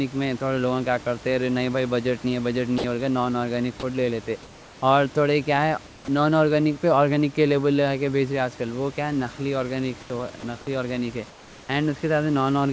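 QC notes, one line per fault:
2.78–2.84 s, sound dropped by the voice detector: just after "نہیں بھائی بجٹ", 60 ms of speech gives way to flat noise, likely because the detector misjudged a quiet word ending as background.
4.43–4.82 s, comfort noise in place of the background: between "آرگینک فوڈ لے لیتے" and "اور تھوڑے کیا", the room noise turns smooth and featureless, about 2 dB quieter, likely synthetic fill during a transmission pause.
10.01–10.10 s, comfort noise in place of the background: a 90 ms gap where the background loses its texture and drops about 1 dB, likely the receiver generating noise in place of the real room sound.
10.40–10.43 s, sound dropped by the voice detector: a brief 30 ms cut, about 20 ms of speech lost to steady noise, likely the detector briefly stopping transmission mid-sound.
11.30–11.69 s, comfort noise in place of the background: the background becomes uniform hiss about 3 dB lower for 390 ms, likely comfort noise while the sender was silent.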